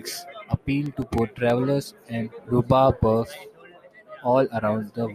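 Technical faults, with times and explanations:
0.86 to 1.5 s, CD scratch ticks: Five sharp ticks cut into the speech in quick succession, roughly eight a second. Each is brief, the longest lasting about two milliseconds. A blemish on the disc surface ruins more data than the error correction can repair. The damage comes round once per revolution. Each time, the player patches the gap by muting or guessing the missing samples. That patch leaves a tiny click at a regular rate.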